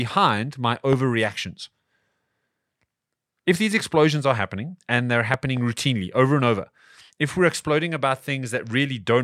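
A sudden electrical pulse, likely from a plug, switch, static discharge or driver glitch, breaks into the signal path twice, producing a loud pop each time. From 0.93 to 0.95 s a single sharp pop stands roughly 15 dB above the speech. Between 5.34 and 5.59 s, after "are happening and they're" and before "routinely over and over", a pair of pops follows in quick succession, roughly 10 dB above the speech, which carries on underneath.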